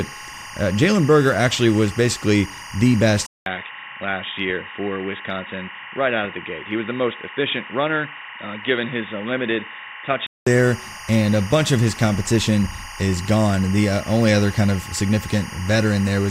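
Timecode bleed runs throughout: 24-frame linear timecode leaks into the speech track, adding a faint chirping warble near 1 and 2 kHz, roughly 20 dB down. After "actually was basically the", the input likely switched to a poorer device at 3.26 s. A 200 ms gap follows, then dull, boxy speech with nothing above 3.8 kHz, slightly lower level and added background noise until 10.47 s.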